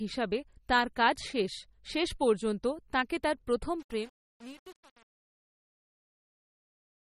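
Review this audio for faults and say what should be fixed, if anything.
The speech sounds watery and swirly all the way through, with nothing above 15.4 kHz, likely MP3 compression at a low bitrate around 32 kbps. Encode from the original at a higher bitrate to fix it.

From 3.8 s, right after "পর্যন্ত তাঁকে তাঁর প্রথম", to the end at 7.07 s, the fade turns gritty. That's truncation distortion on a fade: too few bits, fitting roughly 7, with no dither, so the waveform steps. Render fades at full resolution and dither on the final reduction.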